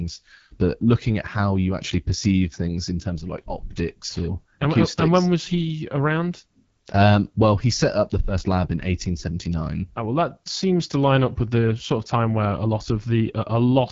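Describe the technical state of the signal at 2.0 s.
At 2.0 s the speech carries AMR wideband (HD Voice) codec damage, present for the whole clip rather than at this moment alone. The codec models the voice as pulses driving a vocal tract filter up to 6.4 kHz and substitutes shaped noise above that, with nothing above 7.4 kHz. The plainly rough, raspy texture points to one of the two lowest rates, around 8.85 kbit/s, where the excitation is coded too coarsely.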